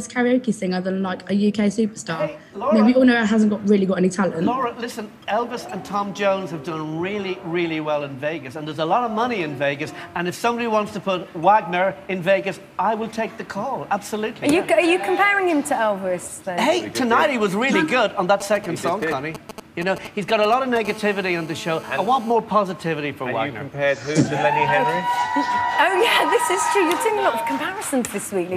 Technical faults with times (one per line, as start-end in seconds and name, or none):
18.40-20.78 GSM signalling bursts
20.85-22.32 GSM phone buzz